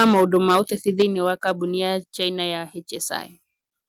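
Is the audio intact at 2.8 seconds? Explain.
Yes, the speech at 2.8 seconds is intact, with no audible fault at that moment.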